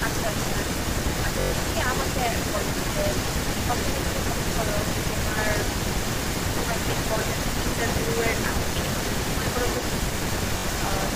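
Echo leak runs through the whole speech clip, from 0 to 11.15 s: a delayed copy trails the talker by about 0.29 s, roughly 5 dB quieter than the speech itself, most likely because a loudspeaker-side echo canceller let the returning sound through. Bluetooth stutter appears at 1.41–1.53 s and 10.58–10.66 s. Short slices repeat as a brief buzz while roughly 107 ms and 64 ms of audio are missing, and the speech then resumes further on.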